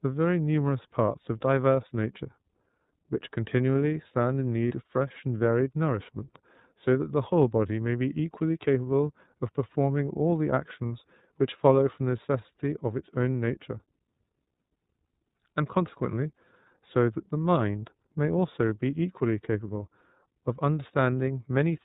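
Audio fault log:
throughout: iLBC codec. The speech is band-limited to the narrowband range, with nothing above 4 kHz, and carries a plainly audible rough, slightly synthetic grain. This comes from coding each frame's excitation on its own rather than predicting from the previous frame, and the cadence of the coding fits 30 ms frames at around 13.3 kbps. Unlike a wideband codec's smearing or an MP3's swirly high-frequency artefacts, the damage here is a dull, rough narrowband texture with no top end at all.
4.68–4.72 and 10.86–10.92: lost iLBC frames. Two short dropouts occur, about 30 ms at 4.68 s and about 60 ms at 10.86 s, the second matching two consecutive frames. Instead of silence or a click, the decoder fills each gap by repeating the last pitch cycle blended with noise, so it sounds like a brief held, buzzy vowel. What separates this from a jitter-buffer stall or from the concealment of a predictive codec is that the speech snaps back clean immediately afterwards, because the next frame decodes independently.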